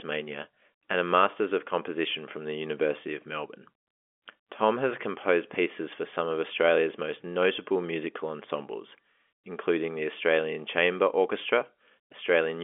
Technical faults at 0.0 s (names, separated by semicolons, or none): none